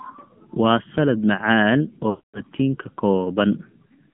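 Throughout, the speech carries the sound of the AMR narrowband mobile codec. The band runs only from about 150 Hz to 3.4 kHz, so it is thin and boxy with no air above that. The codec rebuilds the voice from a vocal tract model fed by sparse pulses, and at this quality that rebuilding is plainly audible as a buzzy, synthetic edge. The degree of coarseness fits a low mode around 7.4 kbps.

From 2.10 to 2.41 s, right after "waa salaad macaan", there is a burst of lost AMR speech frames. About 240 ms of speech failed to arrive intact, which points to a run of roughly twelve 20 ms frames. The decoder fills the gap by repeating the last good pitch and spectral settings at falling gain. The sound smears into a stretched, droning tail that fades to silence, and speech comes back briefly weak or rough.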